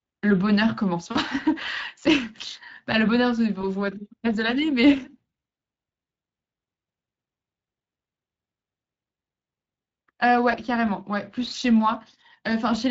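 Speech coded with the Speex codec runs through the whole clip. The CELP coder has too few bits to model the excitation cleanly, so the voice comes out noticeably rough and hoarse, with a noisy edge. That degree of damage fits a mid-range setting of roughly 20 kbps. Three short dropouts show VoIP packet loss concealed by the speech codec: 1.11 to 1.18 s, 3.61 to 3.66 s, and 10.51 to 10.56 s. In each one the decoder lost audio and filled the hole by repeating its last pitch and spectral shape at falling gain. The first gap is about 40 ms, consistent with two lost 20 ms frames, and the other two fit a single lost frame each. Each gap sounds like a brief buzzy tone or coloured noise that fades, and the speech stays weak or distorted for a moment afterward while the decoder's state recovers.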